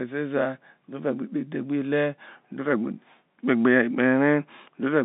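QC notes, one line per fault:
No faults are present in this clip. The speech carries the narrow band of G.711 telephone coding, roughly 150 Hz to 3.7 kHz with nothing above 3.8 kHz, which fits a 64 kbps mu-law line.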